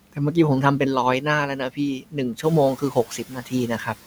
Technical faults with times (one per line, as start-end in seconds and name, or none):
1.99-2.17 speech cut by the noise suppressor
2.78-3.69 speech cut by the noise suppressor